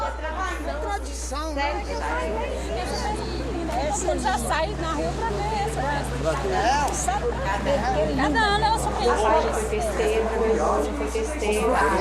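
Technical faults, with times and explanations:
Throughout: mains hum, a steady 60 Hz tone with low harmonics sitting only around 10 dB below the sound, from power-line coupling through a ground loop or nearby transformer. Unlike broadband rumble or wind noise, it holds one fixed pitch that never varies.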